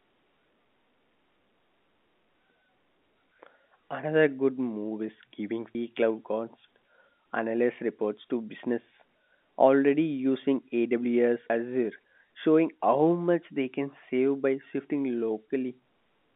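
At 5.75 s there's a skip where roughly a third of a second of speech drops out and the two sides butt together. That's audio missing between chunks, likely the recorder losing a slice while switching its 6-second chunks, all over the narrowband G.711 telephone sound.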